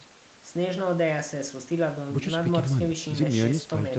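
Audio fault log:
No faults are present in the speech signal, whose content stops at 8 kHz, as expected from a normal call microphone chain and Opus call link.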